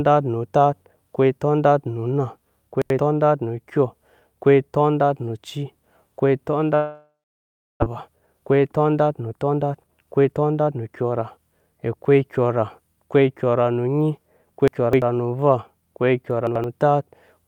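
At 2.82 to 2.99 s, chunks out of order: one piece of about 85 ms was written a chunk late, so it plays after the piece that should follow it. Nothing is lost, but the swap leaves three hard joins, heard as a brief jumbled stutter.

At 6.75 s comes what is likely a long network dropout: audio stopped arriving, and the receiver carried the last sound forward as a buzz that fades over the next second. About 0.69 s of it is plain silence. The speech returns at 7.84 s, with about 0.6 s of it missing.

A jitter buffer speed-up then runs from 7.92 to 11.38 s. After the gap the buffer was holding a few hundred milliseconds more audio than it aims for, so the receiver cut many short pitch-period pieces in a row, roughly half a second in total. The speech plays at about 113% speed with its pitch unchanged, and it sounds rushed.

Chunks out of order return at 14.68 to 15.02 s, where an 85 ms piece arrives three chunks late. 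The longer displacement makes the jumbled stretch longer, about a third of a second. At 16.47 to 16.64 s another piece is one chunk late, giving a short garbled hiccup.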